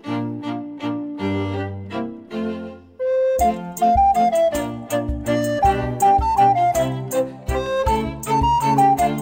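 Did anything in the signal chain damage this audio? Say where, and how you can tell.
Yes. Two isolated sharp clicks, at 7.66 s and 8.60 s, point to dropped samples, likely at the driver or buffer stage. A fraction of a millisecond of the stream goes missing, so the waveform jumps to a later value, leaving a thin vertical line across the spectrum.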